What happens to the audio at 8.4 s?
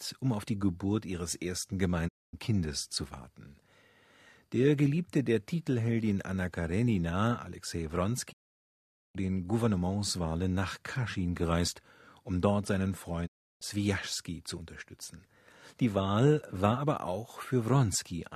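The receiver stopped getting valid digital frames and muted its output, a digital broadcast dropout lasting from 8.31 to 9.17 s. The speech fades out over about 20 ms into silence, and roughly 0.82 s of programme is lost before the sound returns.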